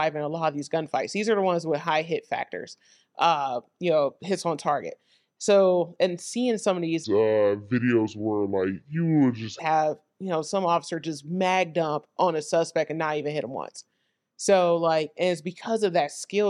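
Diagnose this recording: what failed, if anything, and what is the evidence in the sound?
A section at the wrong speed runs from 7.04 to 9.59 s, between "seeing some of these" and "have you know some". The speech plays at 0.686 times normal speed, slow and about seven semitones low. The likely cause is a sample-rate mismatch at the editing or playback stage.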